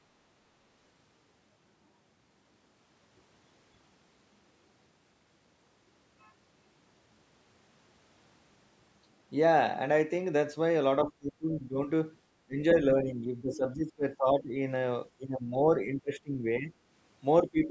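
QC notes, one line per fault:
11.04–11.89 s, 12.46–14.57 s, 15.17–16.72 s, 17.42 s to end: speech suppressed in double talk. The talker dips patchily by roughly 15 to 25 dB rather than going fully silent, likely because an echo canceller ducked both sides during overlapping talk.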